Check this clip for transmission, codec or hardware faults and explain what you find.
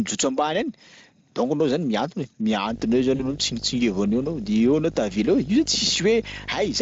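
Two faults are present: a video or display buzz from 2.68 s to the end, and one burst of VoIP packet loss concealed by the speech codec, heard through the light Speex coding.

Video or display buzz, from 2.68 s to the end: a screen or video cable couples into the audio path, adding a 50 Hz field-rate buzz with hash above it and a 15.6 kHz line-rate whistle, roughly 15 dB below the speech. A spectrogram shows a steady 50 Hz ladder and a thin line near 15.6 kHz.

VoIP packet loss concealed by the speech codec, from 3.15 to 3.24 s: about 40 ms of audio, which fits two lost 20 ms frames, is filled by the decoder repeating its last pitch and filter at falling gain. The speech smears into a fading buzzy tone or coloured noise and stays weak briefly afterwards. The spectrogram shows a flat, stretched stretch of sound, and the waveform shows a decaying envelope.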